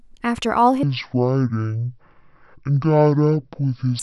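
A section at the wrong speed runs from 0.83 s to 3.99 s of this speech clip, playing at 0.51 times normal speed, so the audio turns slow and drops roughly ten semitones in pitch, likely from being played against the wrong clock.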